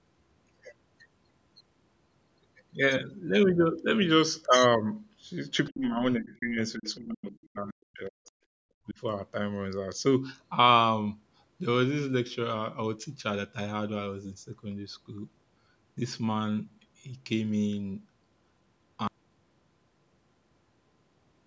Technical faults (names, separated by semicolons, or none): other side's voice leaking through; speech suppressed in double talk; audio dropout to silence